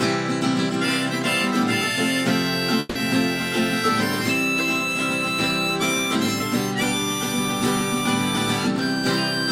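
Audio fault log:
2.79–2.97 s, long network dropout: about 160 ms of audio is replaced by a decaying, buzzy continuation of the preceding sound, then playback resumes without that span, likely because the stream stopped arriving. No silence remains, unlike a mute, and the lost content isn't recovered.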